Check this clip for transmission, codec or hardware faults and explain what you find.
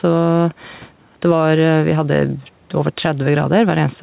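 One fault is present, and it runs through the whole clip: gain pumping. The gain swings by roughly 5 dB whenever speech comes in, so loud and quiet passages sit close together and the speech sounds squashed. The likely cause is microphone gain set far too high, with a fast limiter or compressor pulling it down on every loud syllable. The audio also stops at 4 kHz, which fits a narrowband G.711 call codec and is expected for that path rather than a fault.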